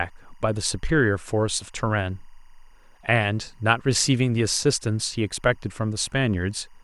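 Timecode bleed runs under the speech: linear timecode at 23.976 frames per second leaks in as a faint chirping warble near 1 and 2 kHz, roughly 40 dB down.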